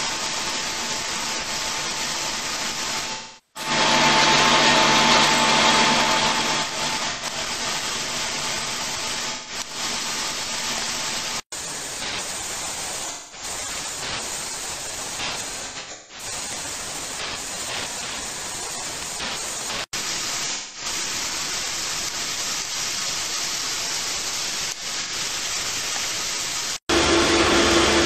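Smeared, noisy, phasey patches break into the sound at 3.12–3.70 s, 7.07–7.25 s, 9.25–9.55 s, 13.06–13.43 s, 15.64–16.25 s, 20.53–20.86 s and 25.01–25.12 s. This is AAC frame loss with concealment. Runs of frames, between 85 ms and 427 ms of audio, went missing, and the decoder rebuilt them from the last intact spectrum. Around 15.6 s the losses are scattered rather than continuous, with the longest unbroken stretch about 150 ms.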